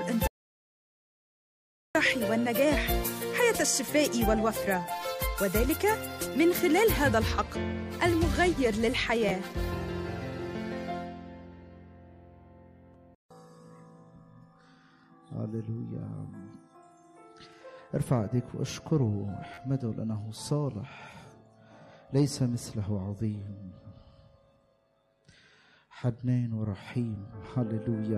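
The audio cuts out from 0.27 to 1.95 s, an audio dropout to silence, likely a lost input. The gap is silent rather than quiet room tone. A repeated buffer at 9.29 s and again at 19.54 s replays an 11.61 ms slice, which fits a 512-sample buffer, two and three extra times. These identical repeats make a short stutter and cost roughly 20 and 40 ms of audio.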